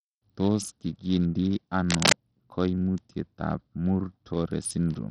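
From start to finish the speech carries heavy Bluetooth SBC compression, likely from a starved bit pool, which fits a link running around 64 kbps. The treble flickers in and out under gritty, aliased noise, unlike plain low-pass band-limiting, which would remove the highs steadily and cleanly.

From 1.89 to 2.15 s, cable scratch noise, likely from a worn cable or connector being moved, lays dense, uneven rustling bursts somewhat louder than the speech. Its ragged, crackly texture sets it apart from a single click or a steady hum.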